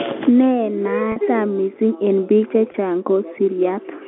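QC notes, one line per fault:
1.12–1.16 s, packet loss with pitch repetition: a 40 ms gap just before "missing eng bik". The last pitch period repeats, so the sound briefly holds with a buzz. This fits two 20 ms packets.
2.72–2.74 s, packet loss with pitch repetition: a 20 ms gap just after "missing eng bik". The repeated pitch period gives a short, slightly buzzy held tone, consistent with one lost packet.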